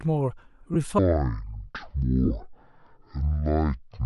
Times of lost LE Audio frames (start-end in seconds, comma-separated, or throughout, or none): 0.74, 2.25-2.31